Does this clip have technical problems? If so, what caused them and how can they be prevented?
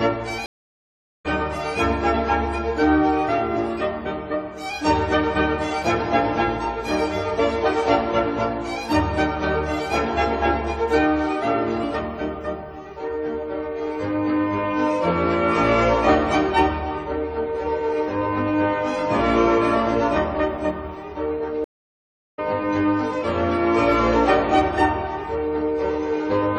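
Yes, two stream reconnects: silence from 0.46 to 1.26 s (782 ms) and from 21.64 to 22.39 s (733 ms). Each time the connection dropped, a fresh decoder restarted mid-stream, and the sound resumes later, skipping about half a second, then nearly three quarters of a second. Larger client buffering and a more stable network link would prevent these dropouts.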